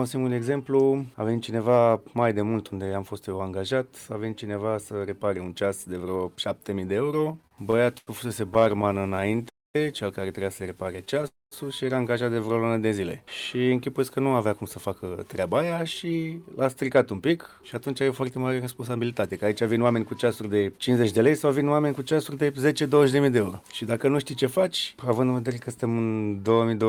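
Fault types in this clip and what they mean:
Repeated stalls (stutter): Packets kept arriving late, so the jitter buffer ran dry again and again and the receiver stretched the last sound to cover each wait. Bursts at 7.25–8.09 s, 8.49–9.45 s and 10.93–11.25 s stutter and drag, with waits up to 90 ms.
Call audio freeze: The likely cause is packets held up in transit, leaving the jitter buffer empty until they arrived. At 9.49 s and 11.27 s the audio halts for about a quarter of a second, mostly silent, then resumes where it stopped.
Jitter buffer slow-down: With its reserve running low, the receiver rebuilt it by repeating tiny pitch-period slices of the audio. From 12.34 to 12.72 s about 62 ms is added, so the sound plays at 86% speed, drawn out but unchanged in pitch.
Jitter buffer speed-up: The buffer held more than its target, so the receiver trimmed short pitch-period pieces repeatedly. 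From 14.17 to 21.6 s the audio runs at 108% speed, hurried but at the same pitch, losing roughly half a second.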